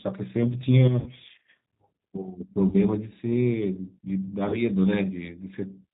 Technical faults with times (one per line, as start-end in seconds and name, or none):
0.00-5.94 G.729 codec
1.00-1.11 VoIP packet loss concealed by the speech codec
2.68-2.77 VoIP packet loss concealed by the speech codec
4.49-4.64 VoIP packet loss concealed by the speech codec